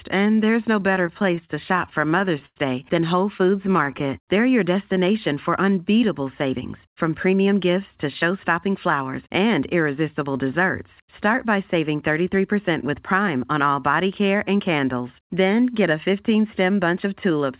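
From 0.8 to 2.58 s the speech suffers repeated stalls, a stutter. Packets arrived late, and the jitter buffer kept running dry. There are sixteen brief holds, the longest 100 ms. The receiver stretched the last sound to fill them. Nothing is lost, but the speech drags and catches.

From 3.38 to 4.02 s a second stutter follows. It has six smaller stalls, none longer than 14 ms. Together they fill 58 ms.

A jitter buffer slow-down overlaps this, from 3.45 to 4.42 s, just before "your destination for unbeatable". The buffer was low. To rebuild a reserve, the receiver repeated single pitch periods. This adds 58 ms. The speech runs at 95% speed, at unchanged pitch, and sounds drawn out.

Just after "your destination for unbeatable", from 6.45 to 7.76 s, comes a jitter buffer speed-up. The buffer held too much audio. The receiver trimmed short pitch-period pieces, roughly a tenth of a second in all. 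Speech runs at 107% speed, same pitch, and sounds hurried.

A second speed-up runs from 8.23 to 9.01 s, ending before "and irresistible desserts". It is milder, at 105%, and removes about 50 ms. Throughout, the call path passes nothing above 4 kHz, which fits G.711 mu-law at 64 kbps.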